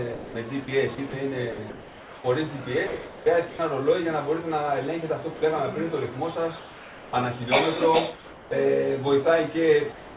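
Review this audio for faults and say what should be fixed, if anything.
Sound chopped by the voice detector, 0.14 to 2.24 s and 2.87 to 3.59 s: the sender's detector likely switched transmission on and off, replacing about 0.9 s and 0.48 s with comfort noise, so the sound stutters.

Sound dropped by the voice detector, 5.36 to 5.42 s: a quiet stretch was likely judged to be background, so 60 ms of sound disappears into steady noise.

Comfort noise in place of the background, 6.59 to 7.13 s, 8.15 to 8.51 s and 9.92 s to the end: transmission likely paused, and a featureless synthetic noise about 2 to 3 dB quieter replaces the real background.

To prevent all three, turn off discontinuous transmission, or lower the sender's voice-detector threshold and lengthen its hangover time.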